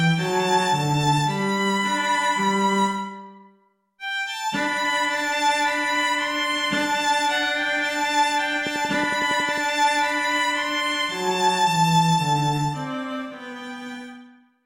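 At about 8.67 s a train of clicks starts and runs until roughly 9.59 s: around ten sharp, near-identical ticks at a steady 11 per second, spaced evenly enough to sound almost mechanical. They poke out well above the sound itself, roughly 10 dB over it. That regular, same-shaped pulsing most likely comes from interference from nearby equipment or a faulty connection or power supply, rather than anything in the source.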